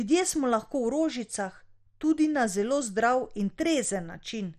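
Speech with heavy MP2 compression throughout. It sounds dull and gurgling, with nothing above 13 kHz. Starved Layer II sub-bands are the likely cause, fitting roughly 56 kbps.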